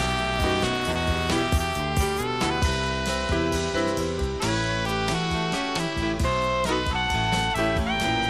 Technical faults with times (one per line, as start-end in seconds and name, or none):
0.00-1.50 mains buzz